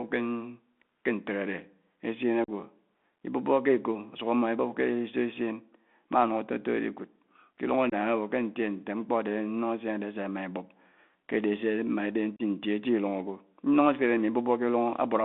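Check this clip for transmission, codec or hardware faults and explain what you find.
The speech carries three kinds of fault: narrowband headset coding throughout, three short dropouts, and one pop.

Bluetooth CVSD headset codec, throughout: the speech is boxed into a telephone band of roughly 200 Hz to 3.5 kHz, with a fine granular hiss underneath, scratchy s sounds and roughness on loud peaks. That fits a 64 kbps CVSD link, which sends one up-or-down bit per sample with an adapting step. Loud high-frequency energy outruns the step, and nothing above the line band survives.

Unconcealed Bluetooth headset packet loss, at 2.44 to 2.50 s, 7.90 to 7.93 s and 12.36 to 12.42 s: the speech drops into abrupt holes of about 41 ms, 23 ms and 30 ms, with hard edges, and the sound returns slightly quieter each time. The gaps point to around ten, then around seven and seven, short headset voice packets going missing. 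Nothing was patched in to cover them, so silence or an idle pattern fills each gap.

Loud pop, at 6.13 to 6.15 s: a single sharp pop sits about 5 dB above the speech, which continues underneath it. The likely cause is a brief voltage step or spike, from a connector, switch, static or driver glitch, added into the signal chain and shaped by the circuitry after it.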